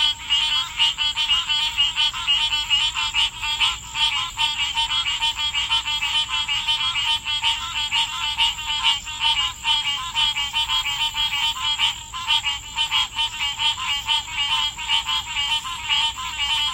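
Everyday sound recording, no technical faults detected anywhere in the clip.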